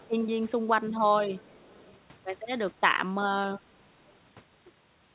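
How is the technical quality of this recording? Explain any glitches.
There's one glitch worth flagging, heard over narrowband call audio with nothing above 4 kHz, which fits a G.711 telephone codec. From 1.3 to 1.96 s there's an echo leak: a very faint copy of the speech trails about 455 ms behind, likely because the far end's echo canceller didn't fully remove its loudspeaker pickup.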